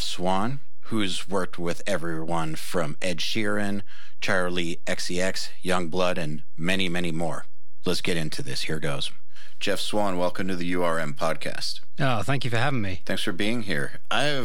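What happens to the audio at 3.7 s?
At 3.7 s the speech carries a DC offset, as it does throughout: the waveform sits shifted about -21 dBFS off zero, inaudible but eating headroom, with a steady band at 0 Hz on a spectrogram.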